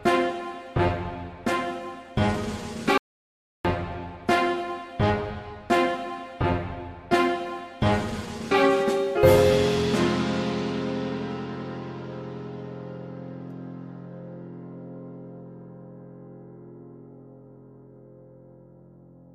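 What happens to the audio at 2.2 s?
Nothing goes wrong at 2.2 s; the audio runs through that moment intact, with no dropout, click or other fault.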